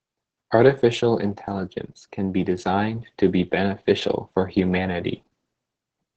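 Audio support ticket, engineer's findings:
Opus voice compression throughout, SILK mode, wideband. Low bitrate, consistent with roughly 10 kbps, forces coarse linear-prediction excitation coding, likely in 20 ms frames. Result: heavy damage, with muffled, hoarse, slightly robotic speech and the band capped near 15.2 kHz.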